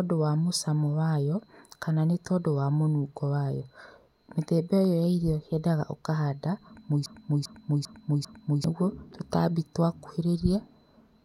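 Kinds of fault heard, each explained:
Broken-record loop: 7.06–8.64 s, a 0.40 s speech fragment repeats four times, likely a stalled stream resending its last piece, so the speech due there is lost.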